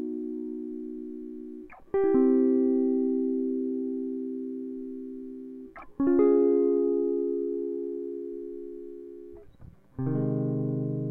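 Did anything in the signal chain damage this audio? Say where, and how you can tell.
No, nothing in the signal chain damaged this music.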